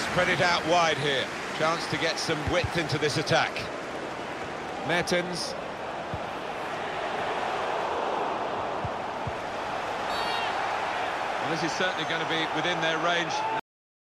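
At 13.60 s the audio has a cut-off end: the final buffers were never written out, so playback stops partway through a sound. There is no decay. The signal falls straight to digital silence, which holds for the remaining 0.42 s.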